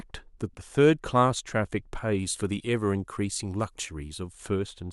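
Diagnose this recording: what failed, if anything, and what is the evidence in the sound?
Pre-emphasis left on from 2.19 to 4.33 s, at the playback stage: the speech becomes thin, bright and sibilant. The treble lift follows the FM 50 µs curve, about 10 dB at 10 kHz relative to 1 kHz, because the matching de-emphasis was never applied.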